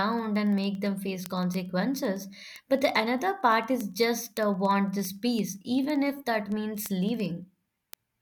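From 0.13 s to the end, word clock ticks recur roughly every 50 ms, as an unlocked receiver clock about 400 ppm off slips a sample each time.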